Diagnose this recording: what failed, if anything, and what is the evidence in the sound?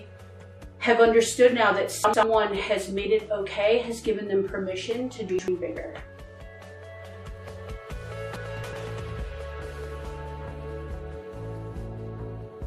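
The driver or buffer stage failed, delivering chunks out of order three times. At 2.04 to 2.23 s and again at 5.29 to 5.48 s, a block of about 93 ms plays one slot late, swapping places with its neighbour. At 8.36 to 8.73 s, a block arrives three slots late. The 93 ms block size fits a 4096-sample buffer at 44.1 kHz. Each event sounds like a brief jumbled stutter. On a waveform and spectrogram, the swapped segments show three abrupt discontinuities and vertical broadband lines at the block edges.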